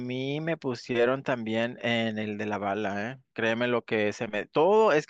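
Nothing in this recording calls for comment, as no technical faults turn up anywhere in it.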